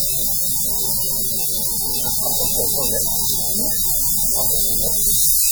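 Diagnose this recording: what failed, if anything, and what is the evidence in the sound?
The codec stage failed, throughout the clip. The sounds ring and smear, with a washy hiss that breathes with the signal. This is likely WMA compression, heavy enough to fit a bitrate near 32 kbps. Long transform blocks spread quantisation noise across tens of milliseconds.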